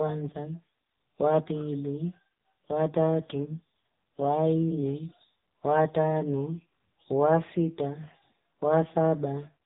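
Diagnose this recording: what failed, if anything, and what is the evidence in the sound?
The failure is at the codec stage: the speech has passed through the AMR narrowband mobile codec, and the damage is heavy for the whole clip. Nothing above about 3.8 kHz survives, which fits 8 kHz sampling. The voice has a buzzy, synthetic texture throughout, which points to a low-rate mode of around 6.7 kbps. At that rate the vocal-tract model gets only a few excitation pulses per subframe, so the natural voice is replaced by a coarse pulse-driven approximation.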